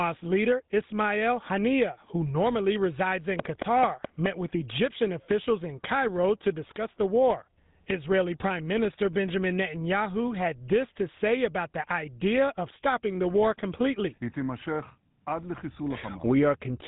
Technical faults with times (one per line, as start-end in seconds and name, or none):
0.00-16.88 GSM full-rate codec
3.39-4.27 train of clicks